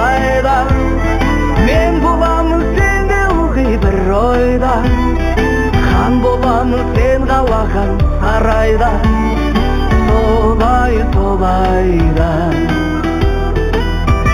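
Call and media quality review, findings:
Imaging from linear upsampling, whole clip. Top end dull, faint metallic shimmer on sibilant-type and high content. Sounds like an 8 kHz source interpolated to 44.1 kHz with straight lines, leaving a mirrored band around 4–8 kHz, roughly 30 dB down. Resampler's the suspect.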